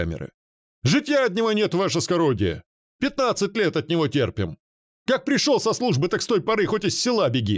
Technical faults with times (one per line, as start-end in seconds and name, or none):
none